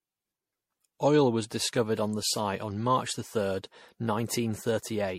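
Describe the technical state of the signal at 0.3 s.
Generation loss at 0.3 s, present throughout: the speech sounds swirly, hollow and smeared, with nothing above 16.3 kHz, likely from about seven repeated MP3 encodes at around 64 kbit/s.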